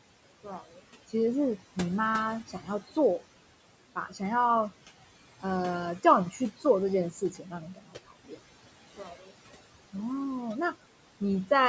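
Speech recording with noise suppressor artifacts all the way through. The room noise sits about 15 dB under the voice, and the suppressor pulls it down by about 17 dB between phrases, so the background pumps and flutters as it drops out and comes back. There's also speech cut by the noise suppressor at 0.44–0.83 s, 2.48–2.68 s, 3.95–4.21 s, 7.11–8.38 s and 8.96–9.31 s. The suppressor mistakes quiet bits of speech for noise and ducks them by about 10 to 17 dB, so they sound swallowed. The worst stretch is 7.11–8.38 s, where close to three-quarters of a second goes faint.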